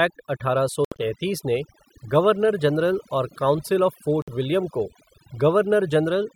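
Overdone noise removal runs through the whole clip: bands near the noise floor are cut away, leaving near-silent gaps with twinkling specks, unlike the steady dullness of simple filtering.

From 0.85 to 1.03 s, just after "अठारह सौ" and before "ने गवर्नर जनरल", the sound breaks into silent holes totalling about 98 ms, the longest 70 ms. At 4.22 to 4.30 s, after "काउंसिल ऑफ़", about 56 ms of silence follows. These are likely Bluetooth dropouts: speech resumes further along rather than stuttering or repeating.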